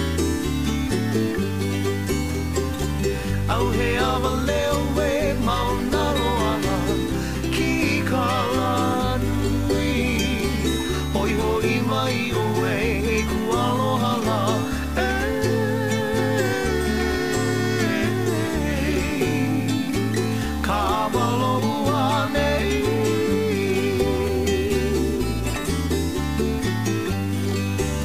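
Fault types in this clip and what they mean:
Low bit depth without dither: the audio was likely reduced to about 6 bits by plain truncation, with no dither added, so every sample snaps down to a coarse step and the error tracks the waveform instead of behaving like steady hiss. Throughout the clip this gives a grainy, gritty distortion roughly 25 dB below the signal that shifts with the sound.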